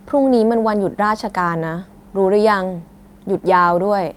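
A short stretch of speech with nothing technically wrong to be heard in the signal at any point.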